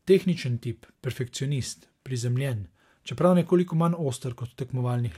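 A short recording of speech, with no technical fault to report. Nothing in it calls for a time stamp or a cause.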